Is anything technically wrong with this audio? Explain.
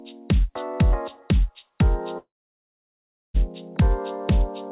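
Yes, there is a long network dropout from 2.18 to 3.37 s. For about 1.2 s no audio likely reached the receiver, and that material never plays. The receiver stretches the last sound into a brief fading buzz, then only near-silence remains for roughly a second before the audio resumes further on, with the gap simply skipped. On a waveform this looks like a short decaying tail followed by a flat line. A spectrogram shows a smeared, fading band, then an empty dark block, all within the call codec's band, which has nothing above 4 kHz.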